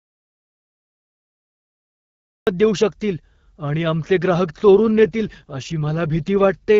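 The clip opens in complete silence, with no room tone at all, until about 2.47 s, when speech cuts in mid-flow at "देऊ शकतील आणि आमचे". This is an audio dropout to silence already under way at the start. The input was likely lost, through a disconnected device, a failed link or a mute, while the recorder kept writing silence, so whatever preceded it is gone.

From about 4.77 s, just after "शकतील आणि आमचे ग्राहक", the speech turns rougher and more synthetic, with no gap and no change in bandwidth, until about 6.64 s. This is an AMR rate drop. The AMR-WB (HD Voice) stream, clear at 12.65 kbit/s, was pushed down to 8.85 kbit/s, leaving fewer bits to model the speech.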